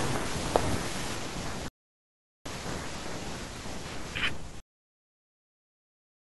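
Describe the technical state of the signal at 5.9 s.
The final stretch of audio was never written out or played back, a cut-off end that begins at 4.60 s and runs to the end of the recording, so 5.9 s falls inside it. The speech is stopped mid-sound at 4.60 s and replaced by flat digital silence, with no decay or room tail. At 5.9 s there is no signal at all, only the dead, perfectly still absence of anything after the abrupt stop.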